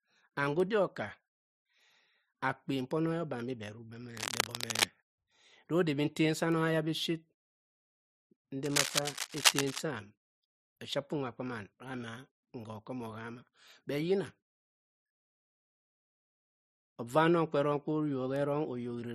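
A speech recording with two bursts of cable scratch noise, from 4.17 to 4.85 s and from 8.63 to 9.80 s. Each is a dense, uneven scratching and rustling that sits roughly as loud as the speech itself. The likely cause is a worn cable or connector being moved, so that its contact resistance jumps rapidly. On a spectrogram these show as ragged broadband smears, and on the waveform as jagged, irregular spiky clusters.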